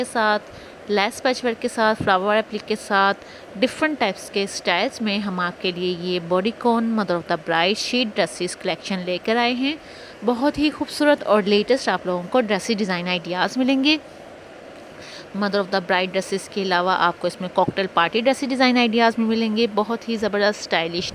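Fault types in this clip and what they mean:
No technical faults can be heard anywhere in the audio. Nothing in it calls for explanation.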